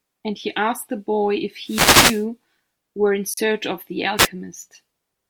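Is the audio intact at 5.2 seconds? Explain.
Yes, at 5.2 seconds the audio is intact, with no dropout, click, distortion or other fault audible at that point.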